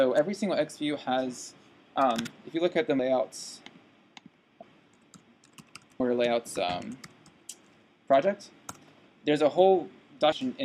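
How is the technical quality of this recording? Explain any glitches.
The recording is marred by three compressed frames skipped dropouts, at 2.99 s, 6.00 s and 10.32 s. At each, the decoder never played a run of whole 32 ms frames, so the sound leaps ahead by roughly half a second, about 150 ms, and about 400 ms respectively. A waveform shows an abrupt envelope change. A spectrogram shows a sudden vertical break.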